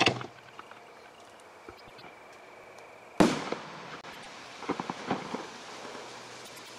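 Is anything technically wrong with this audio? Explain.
Yes, two things are going on.

Overlapping chunks show up at 0.44, 2.64, 3.74, 4.84 and 5.94 s. The audio was handled in 1.0 s chunks, and each new one starts about 100 ms before the previous one finished, so that 100 ms slice plays twice at every join. You hear it as a small stutter or click, and because the joins fall at a fixed spacing, the hiccups have a regular, mechanical rhythm.

Frames out of order hit at 1.77 to 2.02 s, 4.01 to 4.26 s and 6.45 to 6.69 s. In each of those stretches, two neighbouring runs of about 104.5 ms each were swapped and decoded in the wrong sequence, which fits blocks of four frames. The quarter-second plays with its halves exchanged, giving a garbled flutter. Nothing is actually lost, and the timing stays intact.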